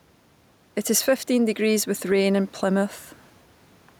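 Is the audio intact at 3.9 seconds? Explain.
No. Gain pumping runs through the whole speech clip, including 3.9 s: the room background, about 35 dB below the speech, swells in the gaps and ducks by roughly 5 dB under louder syllables. The likely cause is excessive input gain driving a fast limiter.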